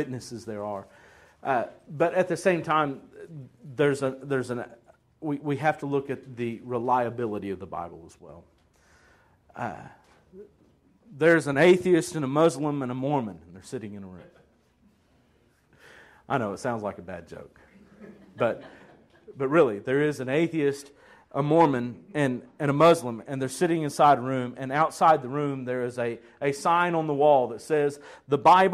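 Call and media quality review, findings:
One channel drops out, 8.19–8.29 s: abrupt fall of about 6 dB, not silence, then instant recovery. Likely one stereo channel lost before mono summing.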